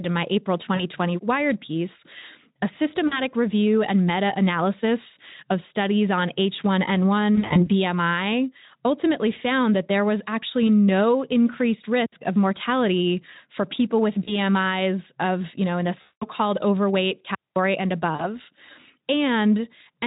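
Speech, with two kinds of fault. VoIP packet loss concealed by the speech codec shows at 0.75 s, 3.07 s, 7.35 to 7.68 s, 14.23 s after "mortality for people with", 16.01 to 16.24 s after "you know in the", and 18.16 s. Most gaps are brief, about 40 ms, and are bridged by stretched, buzzy or noisy sound. At 7.35 s the losses are scattered over 200 ms. At 16.01 s a 200 ms run fades away before "called overweight" returns. The decoder repeats its last pitch and filter at falling gain, so the sound stays thin for a moment after each gap. A digital wireless dropout mutes the signal at 12.06 s for about 66 ms and at 17.35 s for about 213 ms, just after "called overweight". These are clean holes of near silence with no noise burst around them. The receiver lost too much data and faded to mute.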